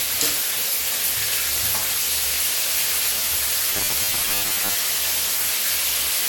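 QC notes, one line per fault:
Throughout: generation loss. The sound is swirly, smeared and hollow, with blurred attacks and nothing above 18 kHz, likely from about five passes through MP2 at 96 kbit/s. Unlike a single low-bitrate encode, the shifting frame grids compound the noise and spectral holes.
3.72 to 4.75 s: robotic sound from repeated short buffers. A rigid metallic buzz at 100 Hz replaces the natural texture, which fits a 10 ms chunk being repeated, with roughly half the real audio skipped. Unlike a codec warble, the buzz pitch stays fixed, likely from late-arriving buffers.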